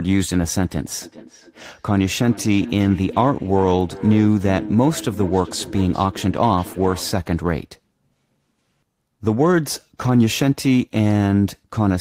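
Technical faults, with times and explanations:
1.02–7.21 s, feedback echo between two devices: speech comes back roughly every 0.4 s, about 15 dB down, as distinct repeats rather than a smooth reverb tail, replayed by a second device.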